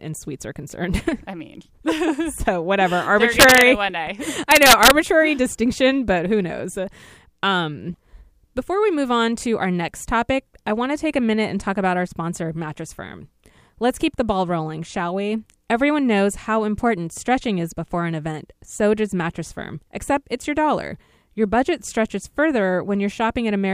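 From 3.40 to 3.61 s, before "one day", integer overflow strikes. Peaks pushed about 3 dB past the limit wrap to the opposite sign. Violent cracks result. It recurs from 4.51 to 4.91 s, about 1 dB over, before "distinction but who knows".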